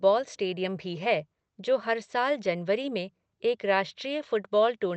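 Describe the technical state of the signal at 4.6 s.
At 4.6 s the speech comes through intact, with no dropout, glitch or other fault.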